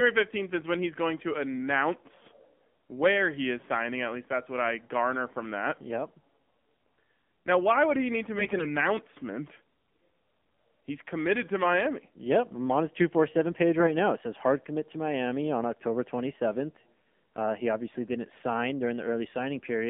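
Speech passed through the AMR narrowband mobile codec for its whole length, with audio confined to roughly 200 Hz to 3.5 kHz and nothing above 4 kHz. The voice has a plainly buzzy, synthetic edge from the pulse-driven vocal tract model, which fits one of the lower AMR-NB modes near 7.4 kbps. From 8.38 to 8.67 s, right after "would he need to", AMR bit errors make the voice hoarse, scratchy and gargly while its pitch and level hold. Flipped low-priority bits misplace the excitation pulses and skew pitch, gain and spectral detail across a stretch that fits about a dozen 20 ms frames, at an error rate of several percent.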